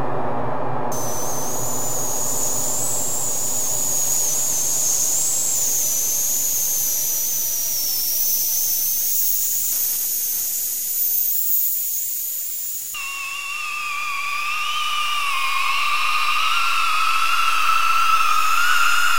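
From 9.71 s to 11.32 s the sound drops about 114 cents, just over a semitone, and runs 6.38% slower before snapping back. This is likely a drift correction step, where clock-matching software changed the playback rate in one jump to rebalance its buffer.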